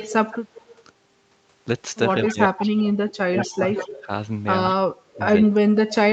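From 0.0 to 0.66 s, and again at 2.25 to 2.7 s, 3.37 to 4.06 s, 4.65 to 4.74 s and 5.14 to 5.2 s, a trailing copy of the speech arrives about 176 ms behind it. It sits roughly 25 to 10 dB below the speech. This is echo leak, likely from a loudspeaker whose echo canceller let its own playback slip back into the call. Unlike a room reflection, it is a discrete, separate repeat.

From 2.31 to 4.09 s and from 4.81 to 6.03 s, the main talker repeatedly dips or drops out, at worst by about 30 dB. This is speech suppressed in double talk, likely the canceller ducking everything when both sides overlap. Rather than an extra copy being added, the original speech itself is taken away.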